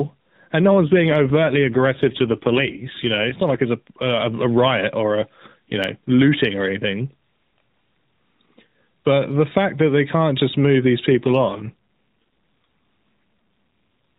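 From 0.7 to 3.6 s there is an AMR rate drop. The speech turns rougher and more synthetic. There is no gap, and the band does not change. The network has pushed the codec to a lower rate and spent the bits on error protection. The sound fits a drop from 12.2 to 5.9 kbps. The rate recovers just before "it's a a". The same drop returns from 11.1 to 12.2 s, right after "can't just move these". Around both, the AMR-NB narrowband coding still cuts everything above 4 kHz.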